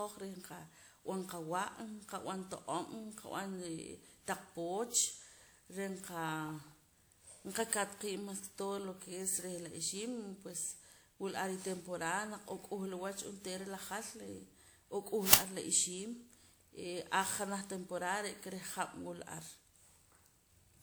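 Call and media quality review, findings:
Generation loss, throughout: swirly, smeared, hollow speech with blurred attacks, worse than a single 96 kbit/s WMA-type encode would explain; bandwidth stops near 21.4 kHz. Likely repeated decode/re-encode, around seven passes, each re-quantising on a shifted frame grid.

Uninitialised buffer, 15.33 s, just before "ar la ixiim": brief, loud burst of digital noise, about 10 ms, consistent with one playback block. Output path sent a buffer before audio was written, playing stale memory as samples.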